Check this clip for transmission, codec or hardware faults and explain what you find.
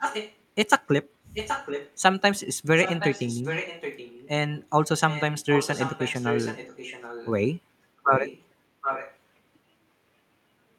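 An echo leak runs through the speech in seven stretches: 0.00–0.37, 1.34–1.93, 2.76–4.29, 5.09–5.23, 5.50–7.31, 8.04–8.44 and 8.81–9.17 s. A second copy of the speech trails the original by about 0.77 s. Sometimes it sits only a little below the main level, and sometimes it is a faint ghost underneath. The likely cause is a far end on loudspeaker whose echo canceller let part of its microphone pickup through and sent it back.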